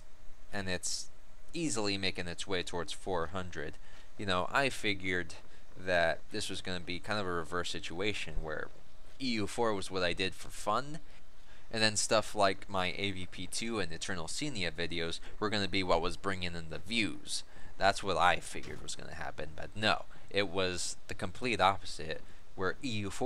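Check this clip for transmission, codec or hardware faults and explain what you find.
Nothing here sounds off: no transmission, codec or hardware trouble turns up anywhere in the audio.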